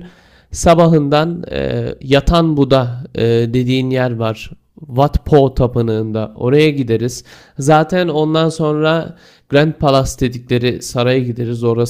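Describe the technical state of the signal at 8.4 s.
At 8.4 s the speech signal is intact, with no audible technical fault at that moment.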